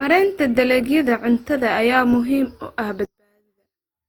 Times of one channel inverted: 3.05-4.09

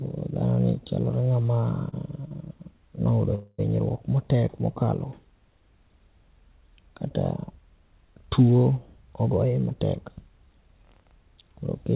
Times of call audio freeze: 3.35-3.60

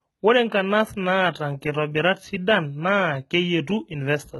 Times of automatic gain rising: none

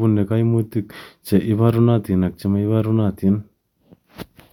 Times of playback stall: none

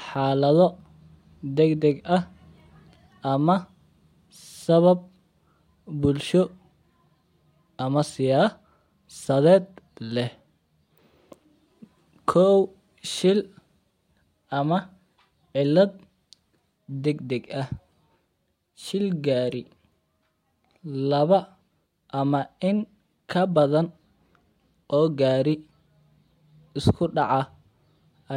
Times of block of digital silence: none

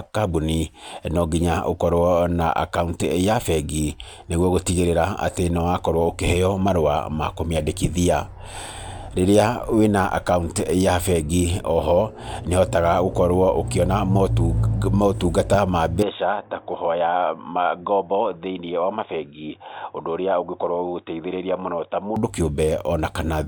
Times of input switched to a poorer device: 16.03-22.16

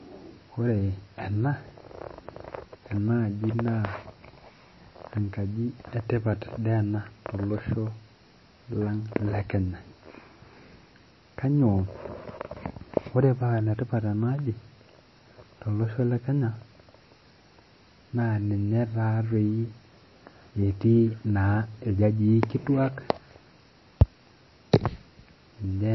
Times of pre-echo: none

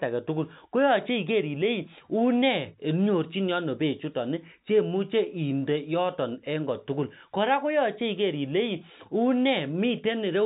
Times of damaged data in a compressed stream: none

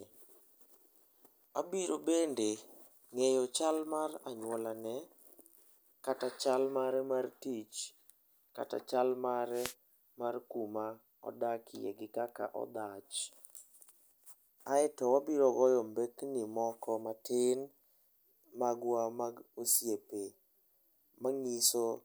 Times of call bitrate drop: none

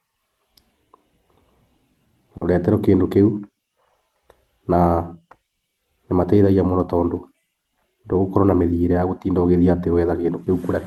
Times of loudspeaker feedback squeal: none

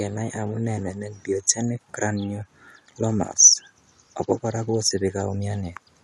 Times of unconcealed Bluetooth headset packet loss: none

